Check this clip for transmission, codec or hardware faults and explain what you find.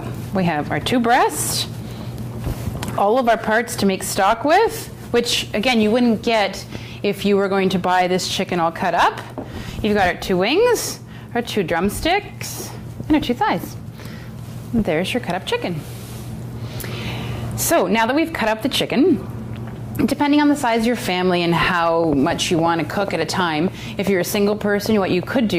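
One fault is present. From 22.04 s to the end at 25.59 s there is a train of clicks. They come about 5.8 times per second, irregularly spaced, and stand well above the sound. Interference or a faulty connection is the likely cause.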